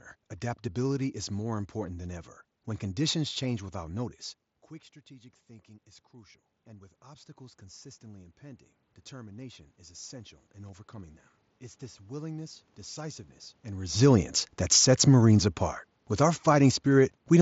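From 13.89 to 17.16 s the automatic gain falls by about 4 dB: the gain control, judging the input too loud or its background noise too strong, eases its gain down steadily. Unlike the talker moving shortly before, the room noise sinks in step with the speech.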